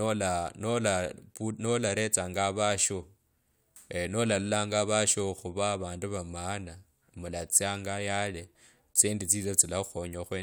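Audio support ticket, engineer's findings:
No faults found in the speech recording; nothing to report for this ticket.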